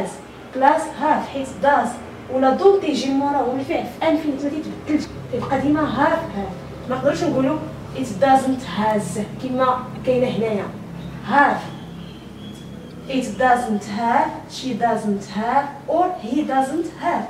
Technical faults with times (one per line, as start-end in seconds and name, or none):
5.03-5.06 broken MP3 bit reservoir
9.94-9.97 broken MP3 bit reservoir
12.89-12.92 broken MP3 bit reservoir